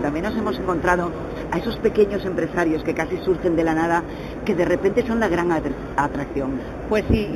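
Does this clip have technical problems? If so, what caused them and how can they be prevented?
Yes, there's imaging from linear upsampling the whole way through. The sound points to an 8 kHz source stretched to 48 kHz by straight-line interpolation. That dulls the top and leaves a mirrored image around 4 to 8 kHz, roughly 30 dB down, heard as faint metallic shimmer. A proper windowed-sinc or polyphase resampler would prevent it.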